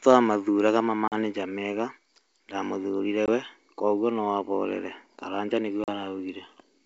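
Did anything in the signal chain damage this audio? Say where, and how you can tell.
Yes: packet loss on an ADPCM call, at the network stage. Hard-edged silent gaps at 1.08–1.15 s, 3.26–3.29 s and 5.84–5.89 s (about 40, 20 and 40 ms of lost audio) leave the decoder's predictor and step size out of step with the sender's.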